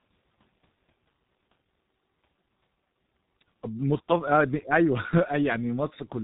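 From start to finish, the speech carries heavy G.723.1 codec damage. Nothing above 3.8 kHz survives, so sibilants and consonant edges are blurred and the voice sounds muffled and hoarse, which fits an internet-telephony coder running at roughly 6 kbit/s. Its slowly updated voice model smears rapid articulation into a rough, buzzy texture. That hoarseness is what separates it from a simple low-pass filter, which would dull the top without roughening the voice itself.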